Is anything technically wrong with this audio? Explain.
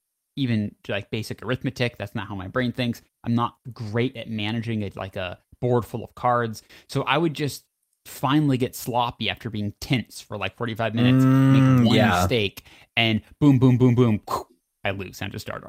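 No, nothing technically wrong stood out on listening to this speech clip.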